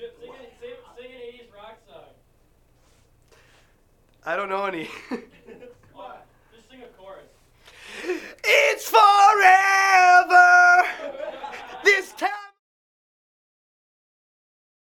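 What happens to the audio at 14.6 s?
The audio at 14.6 s is intact, with no fault at that moment.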